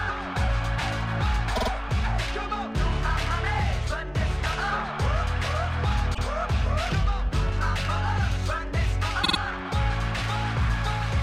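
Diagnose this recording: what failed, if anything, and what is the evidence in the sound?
Repeated frames at 1.55 to 1.69 s, 6.13 to 6.23 s and 9.23 to 9.37 s, a fault in the codec or storage stage. At 1.55 s and 9.23 s a 48 ms slice plays three extra times, adding 144 ms each. At 6.13 s a 96 ms slice repeats once, adding 96 ms. These sizes fit whole compressed frames being written or sent again, so the decoder replays identical audio. The result is a stutter.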